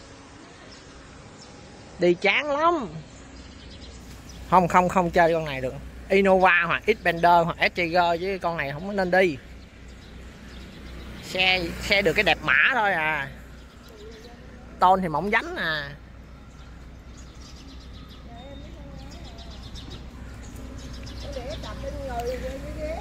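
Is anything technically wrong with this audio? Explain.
Yes. For the first 4.0 seconds the audio is an adaptive stream starting at a low bitrate. From 0 to 4.0 s nothing is heard above about 9 kHz, and coding artefacts are more obvious. The player began on a lean version of the stream to start quickly. The sound points to roughly 32 kbit/s AAC. At 4.0 s it switches to a better version once the connection was measured, which fits about 96 kbit/s. The treble returns abruptly, with no gap.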